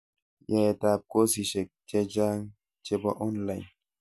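No technical faults can be heard anywhere in this speech.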